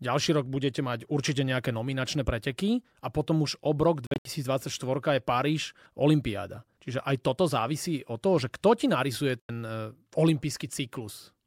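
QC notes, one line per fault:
4.07–4.25 s: Bluetooth dropout. Several silent holes, about 140 ms lost, longest about 70 ms. Sound resumes further on, likely because packets reached the headphones late.
9.40–9.49 s: Bluetooth dropout. One silence of about 90 ms. The audio then continues as if it had played on, skipping the gap.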